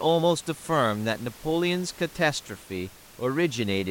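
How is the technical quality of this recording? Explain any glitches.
No glitches turn up here, just a bit of ordinary room noise sitting about 23 dB under the speech.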